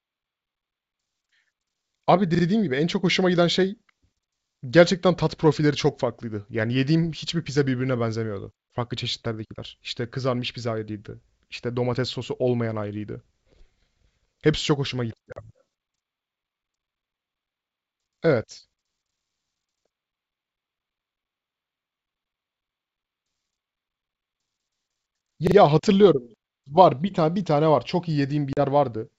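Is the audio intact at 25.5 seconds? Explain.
No. From 25.47 to 25.56 s a 43 ms slice stutters, sounding three times with hard joins. This is a repeated buffer: new audio arrived late, so the device replayed its last block.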